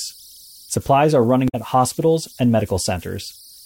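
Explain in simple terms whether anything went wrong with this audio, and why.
Two things went wrong. The first is converter idle tones, present throughout. The chip that turned sound into numbers had no added randomness to break up its patterns. During quiet stretches it repeated itself, leaving a faint, high whistle around 5 kHz under the speech.

The second is damaged data in a compressed stream, from 1.45 to 1.55 s, right after "supplies are". Part of the compressed file was corrupted there. The player misread it and hunted for the next good chunk, so you hear a brief glitch.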